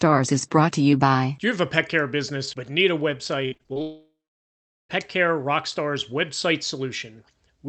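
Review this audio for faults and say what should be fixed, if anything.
Repeated packet loss (robotic sound) at 3.45 to 3.78 s, right after "business but need a": seven packets were lost in quick succession, the longest gap 61 ms. The receiver patched each by extending the previous sound, filling 44% of the span, so the audio turns choppy with pieces missing.

A long network dropout, likely, from 3.82 to 4.91 s: about 1.1 s of audio is missing. A fading buzz gives way to roughly 0.76 s of silence before the sound resumes with the gap's content lost.

To prevent this, stabilise the network link and enable Opus in-band FEC with a slightly deeper jitter buffer to absorb bursts.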